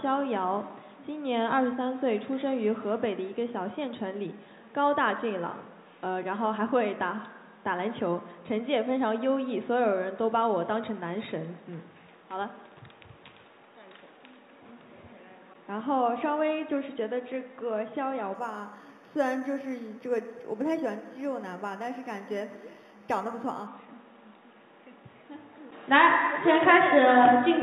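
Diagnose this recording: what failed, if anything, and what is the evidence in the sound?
Imaging from linear upsampling at the sample-rate conversion stage, 18.35 to 23.67 s. The audio was raised from 8 kHz to 48 kHz by straight-line interpolation. A spectrogram shows a mirrored image at 4 to 8 kHz, about 30 dB down, heard as faint metallic shimmer.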